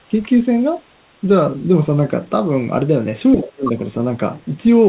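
From 3.33 to 3.75 s, the echo canceller likely could not tell the talker from the returning loudspeaker echo during double talk and turned both down. The speech suppressed in double talk drops by roughly 30 dB for about 0.4 s. Within that dip, at 3.43 to 3.47 s and 3.65 to 3.71 s, residual echo likely slipped past the canceller. The other side's voice leaks through as brief scraps, well below the talker's level.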